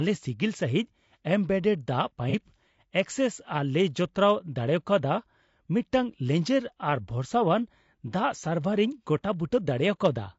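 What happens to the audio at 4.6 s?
At 4.6 s the speech sounds rough and grainy. Noise fills the gaps between the pitch harmonics, and the top band sounds thin and synthetic. The damage is plainly audible and runs through the whole clip, not just this moment. The likely cause is low-delay AAC compression of the AAC-ELD kind. Its short frames resolve harmonics poorly and spend more bits, and the grain fits a low bitrate near 32 kbps.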